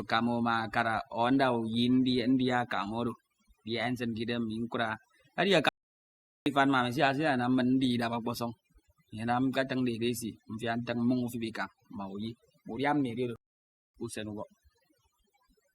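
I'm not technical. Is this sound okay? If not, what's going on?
No. Two things are wrong with it.

The first runs through the whole clip. It is overdone noise removal. A tool meant to clean away background hiss was set too strong. It shuts off slices of the sound it mistakes for noise, and the soft parts of the voice get shut off too. The gaps between words fall to near silence with twinkling specks.

The second is a playback stall, which happens twice. The sound cuts out from 5.69 to 6.46 seconds, a gap of about three quarters of a second. It cuts out again from 13.36 to 13.95 seconds, about 0.6 seconds. The likely cause is that the player ran short of data or was briefly held up, so it went quiet until it caught up.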